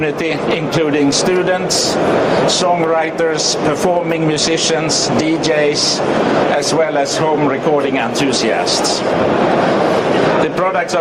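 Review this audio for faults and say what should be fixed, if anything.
Gain pumping runs throughout the clip, with the level swinging by around 10 dB, so loud and soft parts sit squashed together. This is likely input gain set far too high, driving a fast limiter to clamp down repeatedly. To prevent it, lower the input gain so peaks stay clear of the limiter, and use gentler, slower compression.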